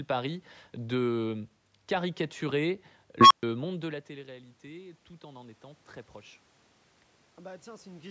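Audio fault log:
3.21–3.43 s, unstable filter: A tone of around 1 kHz rises out of the speech and swells to a harsh squeal in about 97 ms, clipping as it peaks. A recursive filter stage has lost stability, so each pass feeds back more energy than it absorbs and the output grows until the arithmetic overflows. The signal then drops to silence for about 125 ms while the filter resets.
3.67–5.91 s, automatic gain rising: Around 3.5 s the talker moves back from the microphone, and the input level drops by about 19 dB. Over the next two seconds or so, the automatic gain control responds by raising its gain by about 5 dB. Because it amplifies the whole signal, the room noise swells along with the speech, so the background grows audibly louder even though the speech level recovers only partly.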